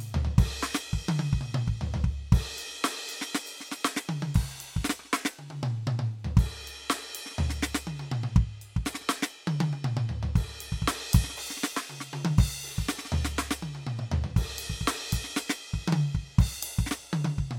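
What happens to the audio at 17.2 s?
Nothing goes wrong at 17.2 s; the music plays through that moment intact, with no dropout, click or distortion.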